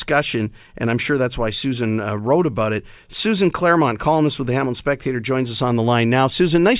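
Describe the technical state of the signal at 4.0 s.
At 4.0 s the speech signal is intact, with no audible dropout, distortion or other fault at that moment.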